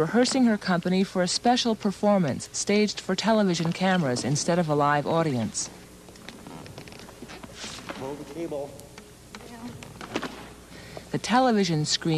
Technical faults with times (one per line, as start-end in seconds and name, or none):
none